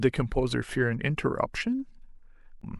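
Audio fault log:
2.60 to 2.64 s, damaged data in a compressed stream: near the very end of the speech there's a quick blip lasting about 40 ms. A short stretch of the compressed data got corrupted, so the decoder read garbage for those frames, lost its place in the stream, and jumped ahead to the next clean frame header. That resync is what gives you the blip.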